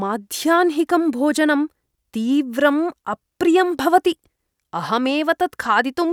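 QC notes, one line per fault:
Nothing stood out on listening to this speech recording.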